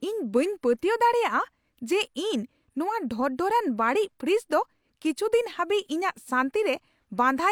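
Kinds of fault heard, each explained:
No technical faults detected.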